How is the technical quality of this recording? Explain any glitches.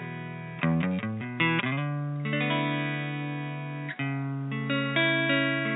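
Nothing here to explain, as no glitches or technical faults turn up anywhere in the recording.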